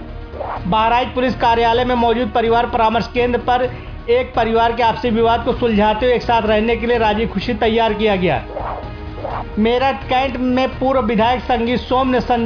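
No technical faults are audible.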